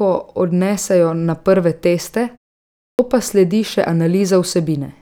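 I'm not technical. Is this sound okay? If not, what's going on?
No. Around 2.7 s, after "odnesejo na prve teste" and a short pause, you get a clipped start after a pause: the playback device dozes off and swallows about 0.29 s, so "pa sledi še" begins abruptly.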